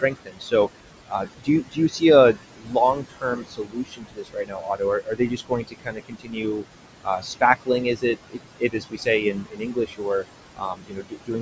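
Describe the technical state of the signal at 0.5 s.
At 0.5 s the speech is being cut by the noise suppressor. This runs from the start of the clip to 0.53 s. The suppressor mistakes the opening speech for noise and pulls it down, by about 19 dB at worst. Roughly 0.4 s of sound comes out swallowed and faint.

Noise suppressor artifacts are also present here, as they are throughout. The background is lowered by about 21 dB. Bands judged to be steady noise are turned down frame by frame.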